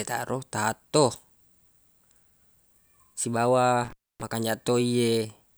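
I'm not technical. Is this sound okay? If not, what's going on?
No. Between about 3.84 and 4.22 seconds the speech cuts out for roughly a quarter of a second. That's an intermittent contact, a loose cable or plug briefly opening. Unlike a digital dropout, the gap has crackle at each edge and faint hiss inside it.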